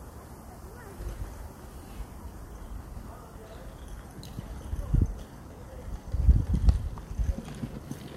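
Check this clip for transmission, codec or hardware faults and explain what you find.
Two short faults show up, both frames out of order. From 1.26 to 1.41 s and again from 4.26 to 4.40 s, two neighbouring runs of frames were swapped in transmission and decoded in that order. Each block is about 70 ms, which fits runs of three frames. The halves of each stretch play exchanged, giving a brief garbled flutter, without any time lost.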